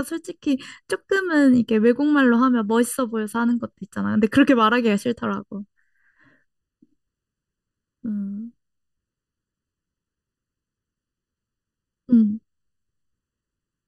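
One channel runs a little under a millisecond behind the other for the whole clip, and when the two are folded to mono the offset copies interfere, producing channel delay (comb filtering). Energy shared by both channels cancels at evenly spaced frequencies, the first notch falling around 700 Hz and the rest recurring higher up the spectrum. The speech comes across hollow and phasey from start to finish, with a fixed coloration that never shifts.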